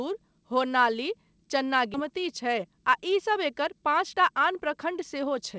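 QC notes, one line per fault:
1.94–1.96 s, skip ahead: playback jumps straight forward with no filler and no silence. Roughly a second of sound is missing, and the two sides meet almost seamlessly. This happens when a block of audio is discarded while later audio is already waiting, so the delay drops by about a second at that moment. Unlike a dropout or concealed packet loss, there is no gap, buzz or smeared tail. The sound is simply cut out.
3.75–5.57 s, jitter buffer speed-up: from here to near the end the sound runs about 10% fast at unchanged pitch and feels hurried. The receiver held more than its target and trimmed many short slices, each one or a few pitch periods long, removing about a fifth of a second in total. Because the pitch stays put, this is not resampling or a playback-rate error. The band still stops at 8 kHz, which fits a wideband call codec such as G.722.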